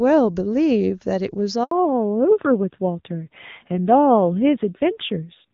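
A speech recording carried over HD Voice (AMR-WB) has a handover gap from 1.63 to 1.71 s: speech frames stop arriving during a network switch, leaving an 80 ms silent hole that shows as a flat line on the waveform and a blank vertical strip on the spectrogram. From 1.71 s, a fallback to narrowband follows. The call drops from the wideband codec, which sounds like a high AMR-WB rate, to a narrowband codec, likely a low AMR-NB rate. The spectrogram is cut off sharply at 4 kHz for the rest of the clip, and the speech sounds duller and rougher.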